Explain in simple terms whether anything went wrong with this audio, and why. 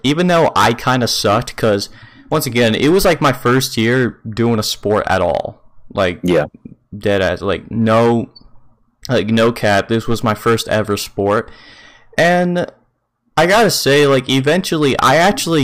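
Hard clipping runs through the whole recording: the speech was driven far past what the system could pass, so loud peaks were cut flat, giving harsh fuzz.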